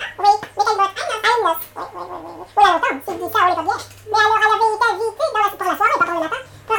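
From start to end, the audio is read two samples at a time, so the reader treats each pair of samples as a single frame. Everything plays at double speed and sits a full octave, 12 semitones, higher than it should.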